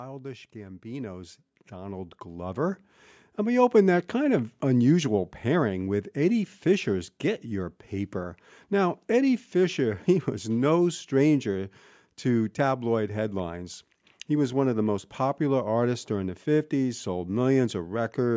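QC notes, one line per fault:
0.52–4.0 s, automatic gain rising: the level climbs steadily by about 12 dB over roughly three and a half seconds, as the gain control judges the input too quiet and keeps raising its gain. Speech and the background noise beneath it swell together, which separates this from a talker simply getting louder, where only the voice would grow. The band still stops at 8 kHz from the call microphone processing.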